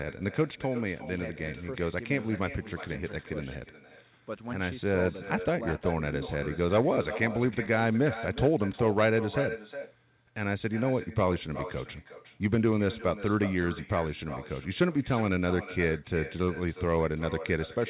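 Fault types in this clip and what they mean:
echo with no canceller: On the far end the call is coming out of a loudspeaker, its microphone picks it back up, and nothing in the chain strips that return out. Each phrase of this speech comes back about 0.4 s later, as a copy about 13 dB quieter and thinner. The echo rides on top of the narrow telephone-band sound of the call path, so it trails the talker all the way through the clip.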